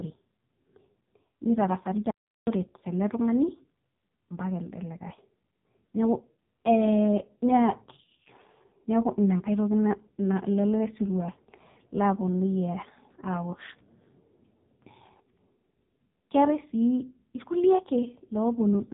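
Throughout, the speech carries heavy AMR narrowband mobile codec damage, buzzy and synthetic, fitting roughly 5 kbps. A spectrogram shows nothing above 3.8 kHz. At 2.11 s, a playback stall silences everything for about 0.36 s, likely from data starvation, leaving a flat gap in the waveform until 2.47 s.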